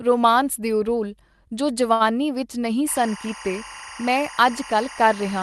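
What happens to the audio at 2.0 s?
A short stall from a late packet runs from 1.93 to 2.03 s, just after "ਰੁਮਾਂਸ ਦਿਓ ਰੋਲ ਜੋ". The jitter buffer ran dry, so the last sound was held about 67 ms, then resumed with nothing lost.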